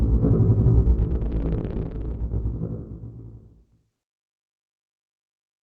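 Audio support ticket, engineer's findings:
No faults found on this everyday-sound recording; call path working normally, top end rolled off above 8 kHz, which fits a low-bitrate call codec.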